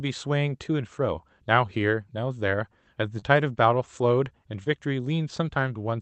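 Short concealed packet loss occurs twice in this speech, at 3.19 to 3.24 s and 4.64 to 4.68 s: about 20 ms of audio arrived too late each time, and the receiver extended the preceding sound to cover it, leaving a brief smeared wobble before the real signal resumes.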